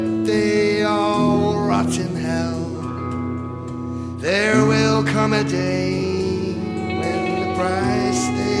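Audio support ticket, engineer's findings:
No faults found on listening; nothing audible in the signal chain needs attention.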